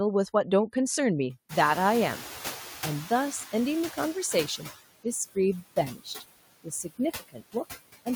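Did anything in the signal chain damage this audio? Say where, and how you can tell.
Yes, the damage is in the call processing stage. A noise suppressor runs through the whole clip, cutting steady noise by about 16 dB. Between phrases the floor sinks, then rises again under speech. A spectrogram shows flickering, speckled patches in the background.

The noise suppressor was catching up when the room noise, a genuine background, jumped by about 22 dB around 1.5 s. From 1.49 to 4.17 s, noise passes with only about 9 dB reduction while the estimate spends 2.68 s adapting. On a spectrogram, the noise floor brightens abruptly, then fades down.

Speech was cut by the noise suppressor at 5.94–6.23 s, 6.64–7.00 s and 7.19–7.55 s, with drops of about 14, 14 and 19 dB. Roughly 150 ms in total across these spans sounds swallowed. The waveform envelope shows notches, and the spectrogram shows holes in the speech energy.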